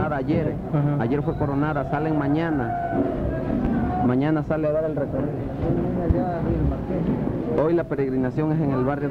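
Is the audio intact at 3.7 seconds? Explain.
No, a loud pop lands right there, from 3.65 to 3.69 s, a single burst of about 35 ms peaking roughly ten decibels above the surrounding audio. A sudden voltage step or pulse, likely from a plug, switch, static discharge or driver glitch, was added to the signal, and the following circuitry shaped it into a brief transient. It is heard as one sharp pop laid over the sound, which continues underneath.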